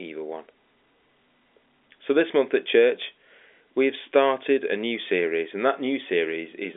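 Nothing stood out on listening to this speech recording, and no technical faults could be heard anywhere in it.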